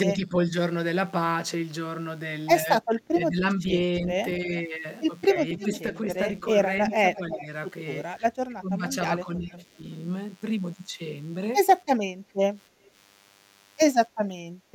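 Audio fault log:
throughout DECT cordless phone buzz: a nearby DECT handset or base is firing radio bursts every 10 ms that the audio circuitry rectifies, laying a thin, steady 100 Hz buzz rich in harmonics under the speech, sitting about 30 dB below it.
0.14–0.36 s, 2.81–4.52 s, 5.34–7.49 s, 8.48–9.62 s speech suppressed in double talk: likely the echo canceller failing to tell the near talker from loudspeaker echo while both sides spoke, so it pulled the voice down by roughly 10, 15, 5 and 20 dB respectively.
5.6–5.8 s, 6.9–7.44 s echo leak: the loudspeaker side's echo canceller likely left part of its loudspeaker pickup uncancelled, so a copy of the voice returns 326 ms late, first faint at about 15 dB down, then stronger at about 10 dB down.
14.55–14.71 s background gated by the echo canceller: while the loudspeaker played, the canceller clamped the microphone hard, so the room sound dips by about 7 dB for a brief moment before the canceller releases and the background returns.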